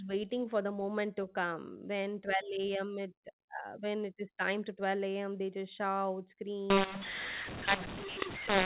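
Right after "they just shout", from 6.70 s to the end at 8.66 s, the telephone-coded speech hits a mu-law and A-law mix-up: mu-law samples decoded as A-law. Levels get scrambled, so the speech turns harsh and gritty, and the quiet gaps fill with hiss.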